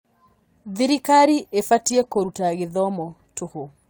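No technical faults can be heard anywhere in the recording, and the speech signal stays steady and intact throughout.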